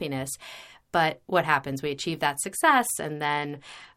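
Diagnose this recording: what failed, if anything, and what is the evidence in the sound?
A Bluetooth SBC bit pool drop begins at 2.91 s and lasts to the end of the speech, a codec-stage fault on the wireless link. From that point the treble goes dull and a gritty, grainy noise rides on the voice. The sound fits the sender cutting the bit pool from about 31 to about 12, near 88 kbps: the highest sub-bands get few or no bits, and the remaining bands are quantised so coarsely that the rounding error becomes audible grit.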